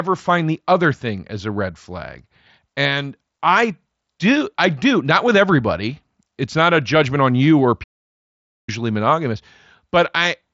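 Right after "judgment on you or", at 7.83 s, the speech cuts out into silence for about 0.84 s and resumes at 8.69 s. This playback stall was likely the player running short of data or being blocked, and its band-limited mSBC sound stopping near 7.7 kHz.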